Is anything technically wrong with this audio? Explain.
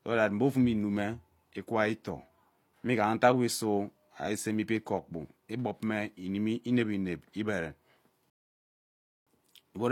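Yes. A rebuffering stall occurs from 8.30 to 9.27 s: the speech cuts abruptly to silence for about 0.97 s, then picks up again exactly where it left off. The player exhausted its downloaded audio and paused until more data arrived, so the clip grows longer by that gap. Unlike a dropout, where a stretch of audio is lost and the sound jumps ahead, nothing is missing here. The silence is inserted and the speech continues seamlessly afterwards.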